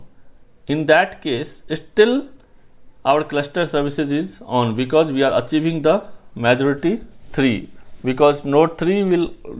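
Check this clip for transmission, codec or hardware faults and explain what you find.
Nothing to flag: no faults are audible anywhere in the clip.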